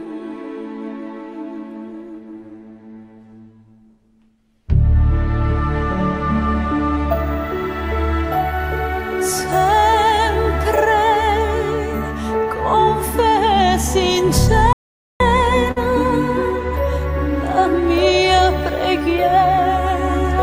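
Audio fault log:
14.73 to 15.20 s, audio dropout to silence: the sound stops mid-flow and about 0.47 s passes in silence, with no room tone, before resuming abruptly. The input was likely lost while zeros were still written. Unlike concealment, nothing is held or faded.
15.71 to 15.87 s, burst of packet loss: the last sound is stretched for about 48 ms and fades as a buzz or hiss rather than falling silent, then playback jumps ahead, skipping roughly 40 ms. That smeared fill separates it from the dead gap just before.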